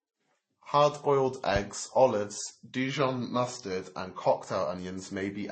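Transcoding between lossy codecs runs throughout the speech: nothing sounds above 8.3 kHz, and two kinds of coding smear blend together, likely from a Vorbis encode near 33 kbit/s re-encoded as MP3 near 32 kbit/s, each pass adding artefacts while the lowest cut-off remains.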